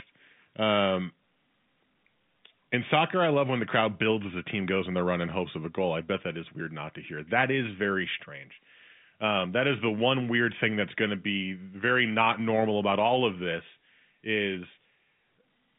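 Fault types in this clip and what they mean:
No faults are present.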